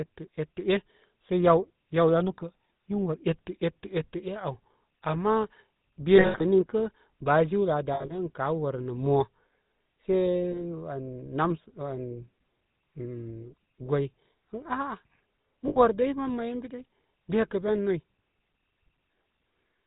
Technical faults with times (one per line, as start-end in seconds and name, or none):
0.00-19.86 GSM full-rate codec
6.16-6.66 lost GSM frames
7.94-8.30 lost GSM frames
10.52-10.62 lost GSM frames
15.68-15.78 lost GSM frames